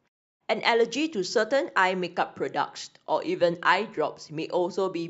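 Nothing in this speech recording reveals a technical fault.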